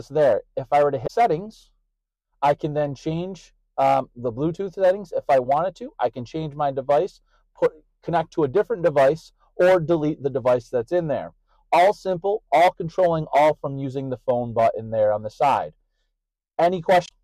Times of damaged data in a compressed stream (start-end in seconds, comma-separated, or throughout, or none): 1.03-1.10, 17.05-17.12